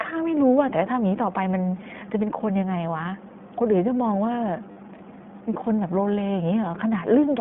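The whole clip carries the sound of the iLBC codec. The band runs only from about 150 Hz to 3.5 kHz, so the speech sounds thin and telephone-like. The codec damage is plainly audible. Vowels have a rough, slightly synthetic grain because each short frame's excitation is coded on its own, with no help from the frame before. The coarseness fits the 15.2 kbps mode with 20 ms frames.

From 4.72 to 4.77 s there are lost iLBC frames. The gap fits two missing 20 ms frames, about 40 ms of lost audio. The decoder filled it by repeating the last pitch cycle, blended with noise. It sounds like a brief held vowel, faintly buzzy and breathy, where the speech should have moved on. Each iLBC frame stands alone, so the next good frame decodes cleanly and the speech recovers almost immediately.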